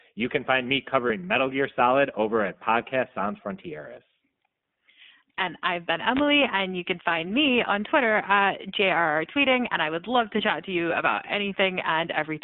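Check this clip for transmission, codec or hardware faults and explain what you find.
Three faults show up in this speech clip: the whole thing runs through the iLBC codec, there's one lost iLBC frame early on, and a wireless microphone noise hit about halfway through.

The iLBC codec coloring is there from start to finish. The line is squeezed into roughly 150 Hz to 3.6 kHz, so everything above that is simply gone and the low end is thinned out. At this 15.2 kbps setting the codec is rebuilding the voice from a coded excitation in self-contained 20 ms frames, which is where the plainly audible rough, slightly synthetic edge on the voice comes from.

The lost iLBC frame lands at about 1.08 to 1.12 s, right after "can find me". The gap is about 20 ms, which fits a single dropped 20 ms frame. The decoder covers it by repeating the last pitch cycle with some noise mixed in, so you hear a tiny held, faintly buzzy vowel instead of silence. 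Because each iLBC frame stands on its own, the voice snaps back to normal immediately afterwards.

The wireless microphone noise hit runs from about 6.12 to 6.24 s, between "I've been" and "and you can find". That's the radio link of an analogue FM mic briefly fading as reflected signals cancel each other out. Receiver noise jumps up as the signal drops, giving a short swish or burst of static over the voice for roughly a tenth of a second before the carrier comes back.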